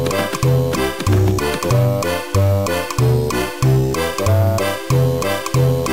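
No technical faults can be heard anywhere in the audio. Nothing in the sound points to a problem anywhere in the chain that captured or delivered it.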